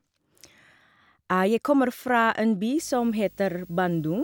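Video or display buzz enters at 2.77 s and runs to 4.24 s: a screen or video cable is coupling into the audio path, adding a 50 Hz field-rate buzz with hash above it and a 15.6 kHz line-rate whine, sitting roughly 30 dB under the speech.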